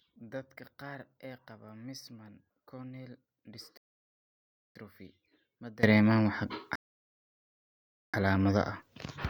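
From the start to 5.83 s the speech is heard as if one stereo channel were inverted. Summed to mono, the centred speech drops by about 21 dB and what remains is a faint residue. That is likely a polarity reversal on one side. Unlike a simple gain loss or a low-pass filter, the loss is selective: whatever sits equally in both channels cancels while the difference between them survives, and the full level returns at once when the fault clears.

Two rebuffering stalls follow. The first runs from 3.77 s to 4.76 s, inside the inverted stretch, and adds about 0.98 s. The second runs from 6.76 s to 8.14 s and adds about 1.38 s. Each time the playback buffer ran dry, the sound cut to clean silence until more data arrived, then carried on from exactly where it stopped. That is what separates a stall from a dropout. A dropout removes a piece of the sound, while a stall loses nothing and only stretches the timeline.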